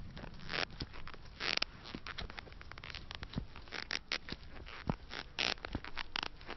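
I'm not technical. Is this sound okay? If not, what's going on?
Yes, it's fine. Nothing wrong can be heard.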